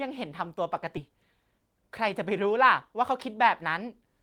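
At 0.97 to 1.10 s a skip ahead drops roughly 0.4 s of speech, and playback jumps straight across with almost no gap. From 1.51 to 2.31 s a jitter buffer speed-up trims short pitch-period pieces, around 50 ms in all, so speech runs about 6% fast at unchanged pitch.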